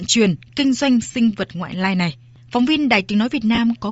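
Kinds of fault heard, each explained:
Bluetooth LC3 compression: The speech carries a plainly audible breathy, grainy edge throughout, its upper range hissy and vague rather than crisp. This likely comes from LC3 coding at a low rate, consistent with about 32 kbps, where upper bands are zeroed and refilled with noise.
Lost LE Audio frames: Twice the speech briefly blurs into a noisy smear lasting about 30 ms, at 1.12 s between "chuyển kinh doanh" and "vật ngoại lai này", and at 3.55 s. The decoder covered missing frames by reusing the last spectrum with randomised signs.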